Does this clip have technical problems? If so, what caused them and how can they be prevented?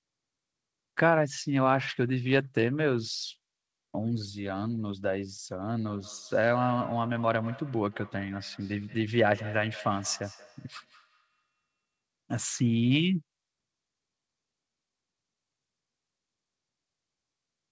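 Yes. From 5.87 to 11.65 s there's a feedback echo between two devices: one device's speaker replays what the other's microphone sent, and that microphone picks it up again. Each canceller ignores the other device's playback, so the sound comes round roughly every fifth of a second, thin and ringing, peaking about 19 dB below the speech. In a shared room, keep only one device on the call, or mute the second one's speaker and microphone.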